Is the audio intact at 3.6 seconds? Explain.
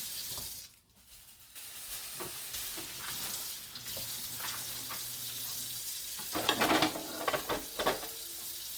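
No, at 3.6 s you're hearing the same Opus compression damage that runs through the whole clip. The grainy, rough texture sounds like the encoder's music mode working at a low bitrate, likely around 24 kbps. When the encoder runs short of bits, it keeps each band's energy but fills the band with folded copies of lower bands or noise, so detail turns gritty rather than swirly. Bandwidth stays full, reaching about 20.3 kHz.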